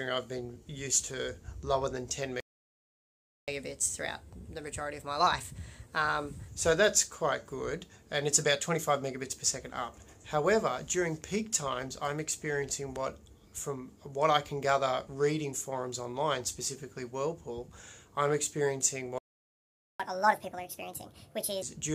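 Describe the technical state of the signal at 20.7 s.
After a stall, the player resamples its backlog at 1.5x from 20.0 to 21.62 s. This catch-up at higher speed makes the sound rush, roughly seven semitones high.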